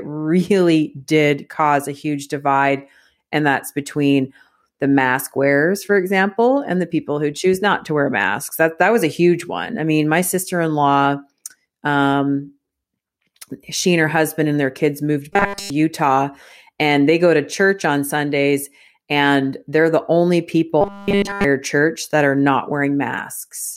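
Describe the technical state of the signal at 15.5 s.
Right after "and their kids moved", from 15.33 to 15.7 s, the speech becomes a rigid, metallic 200 Hz buzz: robotic sound from repeated short buffers, likely from every 5 ms block being looped while new audio was skipped.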